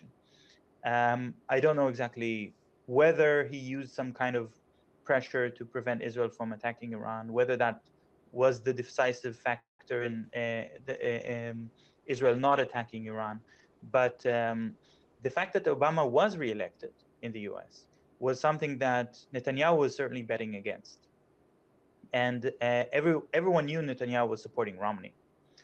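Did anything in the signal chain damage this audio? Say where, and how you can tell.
Yes. At 9.59 to 9.82 s a call audio freeze puts a fading gap, mostly silent for about 0.14 s, into the audio. This is likely network delay that emptied the jitter buffer, and playback resumes without loss.

Short concealed packet loss occurs at 9.99 to 10.03 s and 10.28 to 10.32 s. About 40 ms went missing each time and was patched by extrapolation, which shows up as brief smears.

A call bitrate drop, from 32 to 14 kbps, runs from 10.09 to 15.57 s. The Opus encoder codes more coarsely there, so that stretch sounds rougher and more muffled.

A jitter buffer slow-down from 10.38 to 10.83 s plays at 85% speed with unchanged pitch. Repeated pitch periods add 77 ms as the buffer rebuilds its reserve.

A jitter buffer speed-up from 13.45 to 14.69 s runs at 116% speed with no pitch shift. Trimming pitch periods removes about 0.2 s of excess buffered delay.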